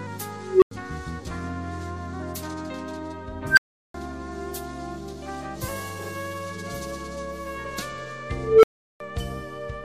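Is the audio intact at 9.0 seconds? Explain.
No. An unstable filter runs from 8.37 to 9.0 s: a recursive filter's output grows without limit, so a tone near 400 Hz swells over about 0.26 s, clips, then drops into roughly 0.37 s of silence.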